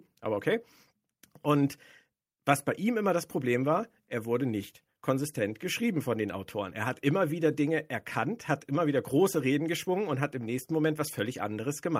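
No technical faults can be heard anywhere in the speech; the signal stays continuous and steady throughout.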